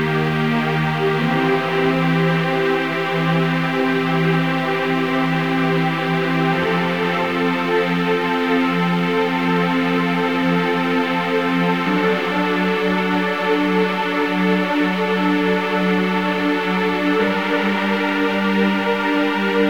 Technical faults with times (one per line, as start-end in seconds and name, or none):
0.00-19.69 low bit depth without dither